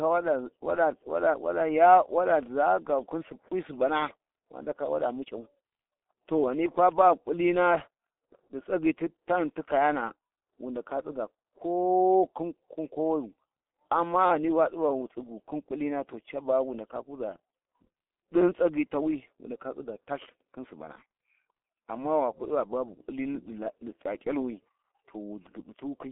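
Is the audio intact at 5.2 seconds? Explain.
No. At 5.2 seconds the speech carries G.723.1 codec damage, and it runs through the whole clip. The codec works in 30 ms frames and rebuilds the voice from a model updated only slowly. The heavy smearing points to a rate near 6.3 kbit/s. Nothing comes through above 3.5 kHz, and the band sits roughly between 300 Hz and 3.4 kHz. The speech sounds muffled and hoarse, with blurred consonants.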